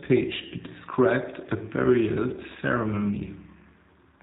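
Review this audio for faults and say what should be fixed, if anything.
Throughout the speech, G.729 codec damage is plainly audible: nothing above 4 kHz survives, and the sound is rebuilt from a filter and sparse pulses, giving a rough, synthetic buzz consistent with 8 kbit/s G.729A. That buzz separates it from simple band-limiting. Prevent it with a wideband codec such as Opus or G.722.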